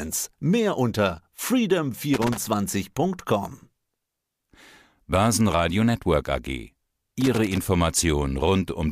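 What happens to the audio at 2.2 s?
An irregular burst of crackling and scratching cuts through the speech from 2.14 s to 2.38 s, roughly a quarter of a second, with the signal chopping in and out. This is loose connector crackle: a worn or dirty contact somewhere in the cable path is making and breaking as it shifts, so the audio is interrupted in rapid, uneven bursts, and any DC on the line turns each reconnection into a pop.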